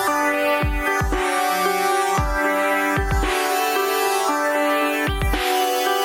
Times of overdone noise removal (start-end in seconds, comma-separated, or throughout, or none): none